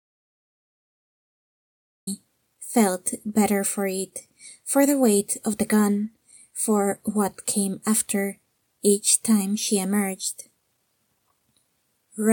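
From 0 to 2.07 s, an audio dropout to silence: silence without room tone, likely from lost input, then sound resumes mid-flow.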